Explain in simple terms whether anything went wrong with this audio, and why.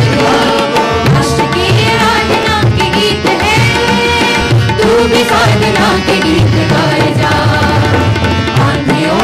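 Four small skips break the sound, at 0.44 s, from 1.44 to 1.46 s, at 2.43 s and at 3.42 s. They come about once a second. This is an overlap between stream segments. The audio arrives in pieces about one second long. The player thought each new piece overlapped the last one, so it cut the overlap away. But that sound was not really doubled. About 17 to 20 milliseconds went missing each time, so the sound jumps with a click or tiny skip.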